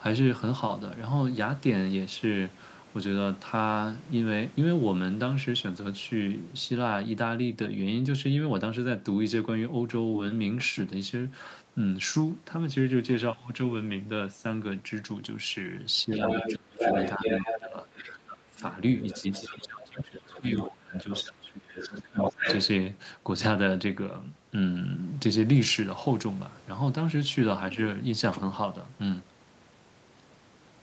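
The trouble sits between 16.07 and 22.68 s. At 16.07 to 16.21 s the speech dips by about 5 dB. This is speech suppressed in double talk. Both ends likely spoke at once, and the echo canceller turned the talker down along with the echo. From 16.17 to 17.6 s a second voice comes through at roughly the talker's own level. This is the other side's voice leaking through. The far end likely played on a loudspeaker, and the echo canceller failed to strip it from the microphone. At 16.58 to 16.82 s the speech drops hard, by about 25 dB. From 17.58 to 18.65 s it is pulled down by about 20 dB. A faint leak, about 30 dB under the speech, sits at 17.98 to 18.08 s. From 19.01 to 21.31 s the leak returns, about 15 dB down. Between 19.22 and 22.46 s the speech is suppressed again, by up to about 20 dB, for around two seconds in total. The last leak, from 21.69 to 22.68 s, is as loud as the talker.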